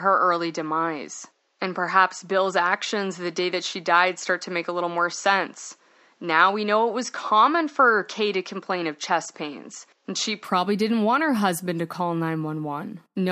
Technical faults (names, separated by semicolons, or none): input switched to a poorer device